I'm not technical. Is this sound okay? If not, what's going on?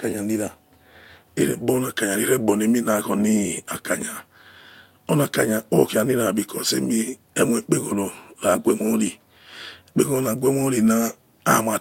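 Yes, the recording shows no technical faults anywhere along its length.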